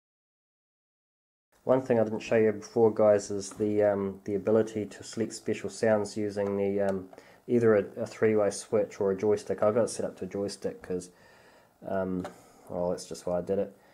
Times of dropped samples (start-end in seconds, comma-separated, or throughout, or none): 9.63